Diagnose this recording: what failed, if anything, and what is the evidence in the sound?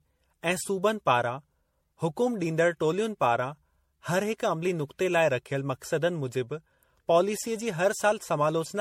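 Codec stage: swirly, hollow speech throughout with nothing above 16.5 kHz, fitting 64 kbit/s MP3 but worse. Likely generation loss: about seven re-encodes stacking artefacts.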